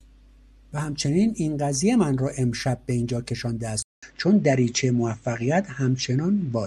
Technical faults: input switched to a poorer device

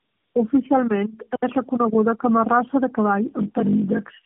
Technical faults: tandem speech coding; block size mismatch (padded)

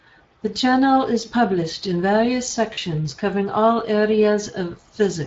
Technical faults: Speex codec; underrun with held sample; VoIP packet loss concealed by the speech codec

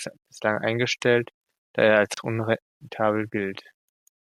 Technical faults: gap at a join of encoded pieces

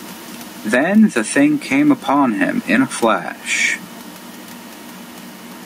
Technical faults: gain pumping

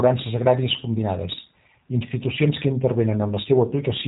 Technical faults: G.729 codec

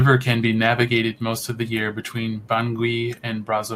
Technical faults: none

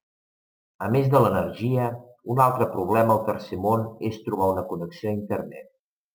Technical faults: crude rate conversion

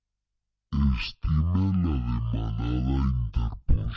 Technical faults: wrong sample rate

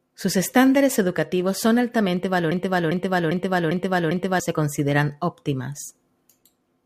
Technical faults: periodic USB or driver dropouts; broken-record loop

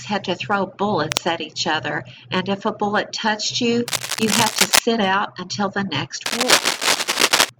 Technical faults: cable scratch noise

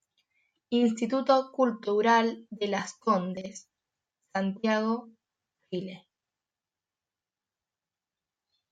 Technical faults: chunks out of order

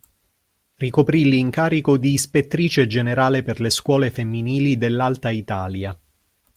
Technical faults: none

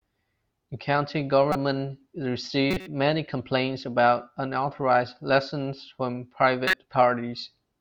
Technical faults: corrupt frame decoded

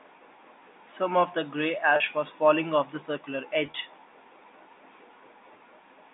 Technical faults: packet loss with pitch repetition

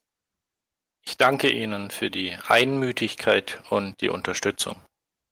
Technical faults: none

